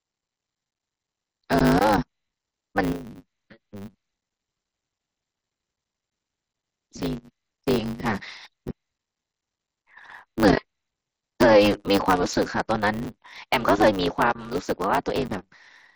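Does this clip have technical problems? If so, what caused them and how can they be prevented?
Yes. Throughout the speech there is a block size mismatch (truncated): one stage writes longer blocks than the next reads, dropping each block's tail. This gives a steady 100 Hz buzz and speech running 1.16 times fast at normal pitch, which sets it apart from a sample-rate error. The pattern fits 512-sample blocks. Matching block sizes between stages, or buffering the leftover samples instead of discarding them, prevents it.

Unconcealed Bluetooth headset packet loss leaves abrupt holes at 0.71 to 0.76 s (30 ms lost across 60 ms, runs up to 15 ms), 1.59 s, 13.05 s (7.5 ms) and 15.28 s, heard over the mSBC wideband link. Unlike concealed loss, nothing fills the gaps, so their edges are abrupt. A stronger radio link and packet loss concealment on the receiver prevent it.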